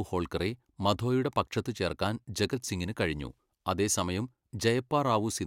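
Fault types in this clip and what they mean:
Nothing to flag in this one; the speech comes across without any technical faults to point out.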